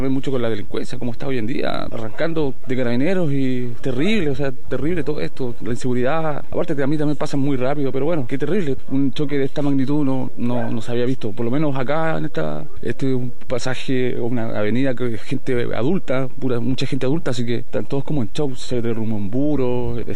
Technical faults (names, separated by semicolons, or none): DC offset